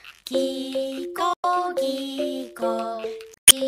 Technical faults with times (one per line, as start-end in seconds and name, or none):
1.32-1.45 damaged data in a compressed stream
3.34-3.52 damaged data in a compressed stream